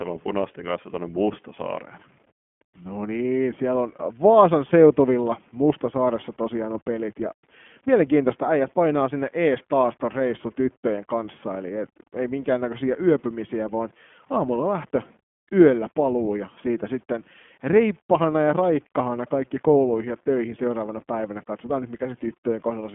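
Throughout, the speech passes through the iLBC codec, coding each 20 ms frame independently and cutting everything above 3.6 kHz, leaving it muffled, slightly rough and synthetic, consistent with the 15.2 kbps mode.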